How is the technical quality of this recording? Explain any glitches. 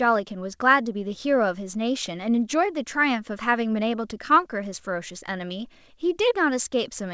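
No glitches; the speech comes through without faults.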